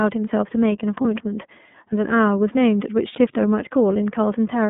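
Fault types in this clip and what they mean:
iLBC codec: The speech passes through a narrowband VoIP codec that codes each frame on its own. Here the band runs from about 150 Hz to 3.5 kHz, so nothing above that reaches the ear. The frame length and rate fit iLBC's 30 ms mode at 13.33 kbps. The coding damage is plainly audible. The voice stays clear but sounds rough and somewhat synthetic throughout.
lost iLBC frames: Two short dropouts occur, at 1.01 to 1.05 s and at 3.12 to 3.15 s. Each lasts about 30 ms, which fits a single lost frame. The decoder fills each gap by repeating the last pitch cycle mixed with noise. That patch is heard as a brief held, slightly buzzy vowel. The voice then returns to normal almost at once, because each frame is decoded independently.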